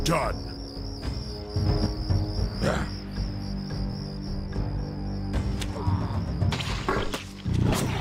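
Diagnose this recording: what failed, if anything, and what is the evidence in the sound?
A sudden gain jump at 1.66 s: sound and noise floor step up together by about 5 dB, holding until 1.86 s. Since everything shifts at once with no ramp, it's likely a digital gain change in the processing chain, applied between adjacent samples.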